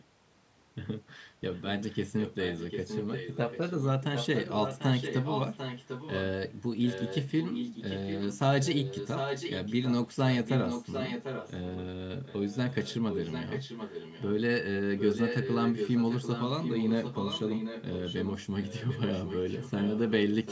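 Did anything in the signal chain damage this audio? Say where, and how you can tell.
Yes, there is echo leak at 0.00–0.04, 1.53–6.21, 6.82–11.81, 12.25–14.3 and 14.98–20.52 s, in call processing. A copy of the speech trails 745 ms behind, barely audible at first, later almost as loud as the talker. Likely a loudspeaker-side echo canceller failed to remove it.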